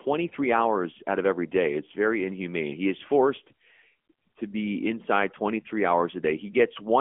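Speech passed through the AMR narrowband mobile codec for its whole length. The band is squeezed to about 200 Hz to 3.4 kHz, and nothing survives above 3.5 kHz, so sibilants lose their hiss and the voice has a boxed, telephone quality. The vocal-tract modelling is plainly audible as a buzzy, synthetic edge, which fits a mid-rate AMR-NB mode near 10 kbps. On a spectrogram the energy stops sharply at 3.5 kHz.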